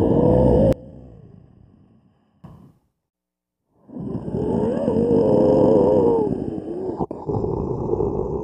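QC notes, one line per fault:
0.73–2.44 s, one channel inverted: summed to mono, the sound drops by about 24 dB, likely because one channel's polarity is reversed so shared content cancels. The waveform collapses to a sliver; the spectrogram nearly empties.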